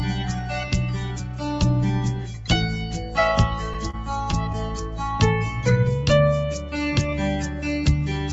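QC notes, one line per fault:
3.90–3.95 s, short stall from a late packet: the sound briefly hangs, held about 29 ms too long with a faint buzz or dip. A packet arrived late, the jitter buffer ran dry, and the receiver stretched the last audio until it came, then resumed with nothing missing, about 29 ms later.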